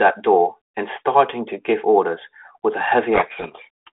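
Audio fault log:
3.14 to 3.9 s, codec payload misread: the decoder takes the G.726 code words in the wrong bit order, so each difference value becomes the wrong step and the speech sinks under harsh distortion. A spectrogram shows noise smeared across the 200 Hz to 3.4 kHz band, and the waveform turns dense and jagged.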